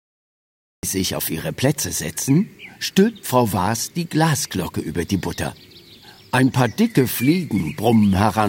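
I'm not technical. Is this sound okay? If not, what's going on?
No. This is a cut-off start. The first 0.83 seconds are complete silence, and at 0.83 seconds the sound begins abruptly, already underway. Unlike a gentle fade-in or a brief dropout, it never builds up naturally. The recording simply began late.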